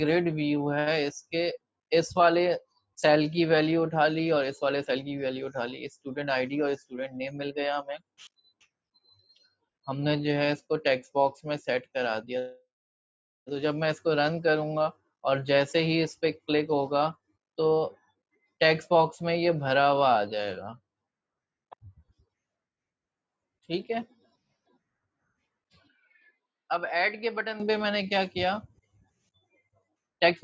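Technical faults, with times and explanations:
25.87–27.60 s, input switched to a poorer device: the capture path likely jumped to a different, lower-grade microphone for about 1.7 s and then returned. That device passes a narrower band than the call processing elsewhere, which reaches 8 kHz, so the sound abruptly turns dull and boxy. The level also falls by roughly 5 dB, and a new noise floor appears about 40 dB below the signal. There is no gap at either switch.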